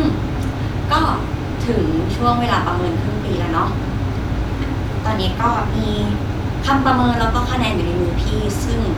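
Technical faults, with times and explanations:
No technical faults can be heard in this speech recording; the signal stays continuous and stable throughout.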